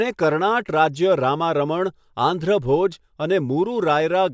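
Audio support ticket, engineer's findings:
No faults found on listening.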